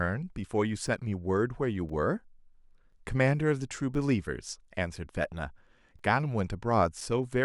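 Periodic USB or driver dropouts, from 0.87 s to 7.01 s: something blocks the audio path every 1.02 s, briefly silencing the speech and producing regular ticks.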